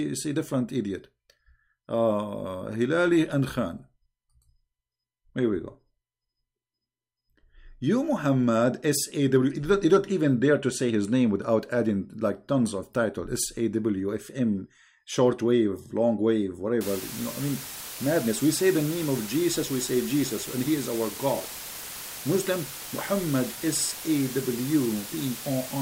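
From 16.81 s to the end, a constant, even hiss sits close to the level of the sound itself, about 10 dB below it, with no grating distortion. This is low bit depth with dither: the audio is reduced to 5 bits, and dither before rounding turns the coarse quantisation error into steady white noise.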